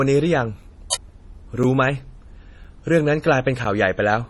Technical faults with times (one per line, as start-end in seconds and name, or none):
0.00-4.30 low-bitrate audio saved at a high bitrate
0.63 gap between chunks
0.93-0.95 uninitialised buffer
1.63 gap between chunks
2.64 gap between chunks
3.65 gap between chunks